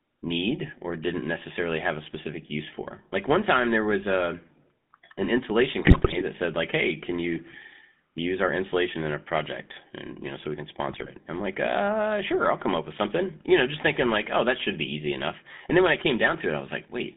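From start to finish the speech carries the buzzy, gravelly roughness of the GSM full-rate codec, which fits 13 kbps GSM coding: pulse-driven vocal-tract modelling leaves a harsh edge. A spectrogram shows energy confined between 150 Hz and 3.6 kHz, with nothing above.

At 5.82 to 6.23 s, and again at 10.89 to 11.09 s, GSM bit errors corrupt decoder parameters, throwing out squawks, pops and gargling. The waveform shows sudden level spikes, and the spectrogram shows smeared, distorted frame-length blocks.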